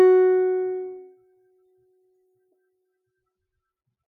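From the start, the music pumps and flutters: sustained parts and tails keep sinking while attacks punch through, so the level swings by something like 20 dB and the sound thins out between hits. This is a noise suppressor applied to music. A processor built for speech stays switched on, mistakes the steady tones and ringing decay for background noise, and keeps pulling them down whenever nothing sharp is happening.

Between 1.11 and 2.68 s, a stretch of about one and a half seconds sinks further, dropping by about 10 dB at its deepest, with held material fading and decays cut short while any sudden onsets still come through. This is sound cut by the noise suppressor. Here the processor judged the sustained content to be noise and attenuated it harder than the surrounding music.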